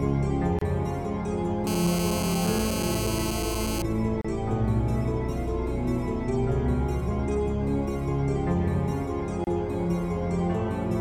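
Three short dropouts break the audio: gaps at a join of encoded pieces at 0.59 s (26 ms), 4.21 s (32 ms) and 9.44 s (29 ms). Separately encoded sections were spliced untrimmed, leaving encoder delay and end padding as short silences. From 1.67 s to 3.82 s, a GSM phone buzz sits about 7 dB below the signal. It is a steady, raspy 217 Hz tone rich in harmonics, from a nearby handset on a call whose transmit bursts were rectified by the audio circuitry.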